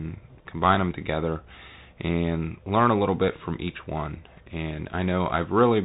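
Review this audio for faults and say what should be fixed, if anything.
The whole clip has the Bluetooth CVSD headset codec sound. Nothing passes above 3.8 kHz. One-bit adaptive steps add grainy hiss and scratchy sibilants. Record over a wideband link instead.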